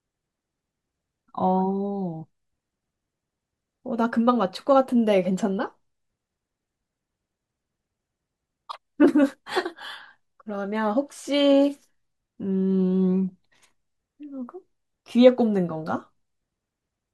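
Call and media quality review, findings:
No faults found: the speech signal shows no audible defects from any processing or transmission stage.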